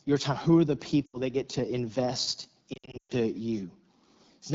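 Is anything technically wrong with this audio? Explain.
Yes. The speech sounds rough and raspy throughout. That is the AMR wideband (HD Voice) codec at a low rate, consistent with its 8.85 kbit/s mode. Its pulse-driven vocal tract model runs out of bits for fine detail, and the top band is filled with shaped noise.

There are also lost AMR speech frames. At 1.05 to 1.18 s, between "are the" and "that get to invest", the sound smears and dips briefly. That fits about four 20 ms frames, 80 ms in all, being replaced by repeated pitch and vocal tract settings at falling gain. After "that get to invest", from 2.73 to 3.12 s, the audio warbles and drops out repeatedly over 360 ms. The gaps total about 240 ms, and the longest run, 120 ms, fades to near silence before the speech returns weak.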